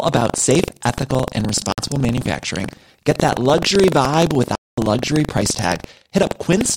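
From the start of the speech a steady robotic buzz at 23.4 Hz rides on the signal. This is buffer tearing, with writer and reader crossing inside each period, which fits a 2048-sample buffer. A small slice of each period replays audio about a tenth of a second old.

Two Bluetooth dropouts cut the output to silence, likely from packets arriving too late. The first runs 1.72 to 1.78 s, 56 ms, after "about safe ethical and". The second runs 4.55 to 4.78 s, 224 ms, between "that luxury vibe" and "luxury price". Both resume as though playback continued.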